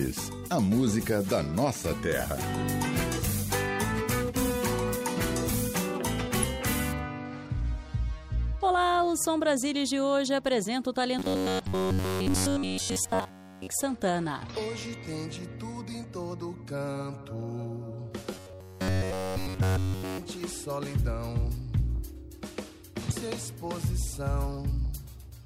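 Brief glitches break into the sound at 6.40–6.44 s, 11.63–11.67 s and 23.08–23.12 s. This is damaged data in a compressed stream: the decoder misreads corrupted frames, loses sync and skips to the next header. From 11.19 to 13.68 s and again from 18.32 to 20.18 s, the audio turns into a rigid metallic buzz near 93.8 Hz. This is likely robotic sound from repeated short buffers, with nearly everything replaced by loops of about 10.7 ms.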